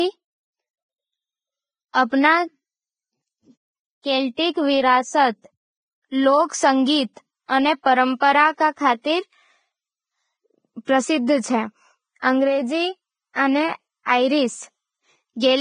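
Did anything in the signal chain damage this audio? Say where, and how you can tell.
Yes. The damage is at the codec stage and runs through the whole speech clip. Nothing is present above about 9.7 kHz, and the treble just below that cut-off sounds grainy and hissy rather than detailed, with consonant onsets smeared. That pattern is likely heavy Vorbis compression. At a rate that fits roughly 17 kbps, the encoder drops the top band and quantises the remaining high-frequency residue so coarsely that the fine structure is replaced by noise of similar energy.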